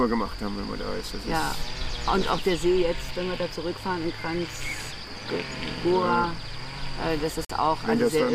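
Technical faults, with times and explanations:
7.45 to 7.50 s, Bluetooth stall: the wireless link likely lost packets to interference, so the receiving buffer emptied before replacement data arrived and playback had nothing to render. The result is an abrupt drop to silence lasting about 46 ms, a hard gap rather than a fade, after which the sound returns just as suddenly. It falls near the end of the clip as a brief, sharp-edged dropout.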